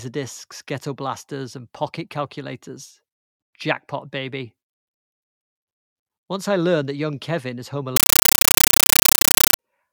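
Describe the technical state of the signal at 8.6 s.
At 8.6 s you're in the middle of a compressed stream played as audio, running from 7.96 to 9.59 s. A bitstream, which fits 448 kbps AC-3, is going out undecoded, so the speech turns into loud chattering static: 9.33 ms noise bursts then silence, 31.25 times a second.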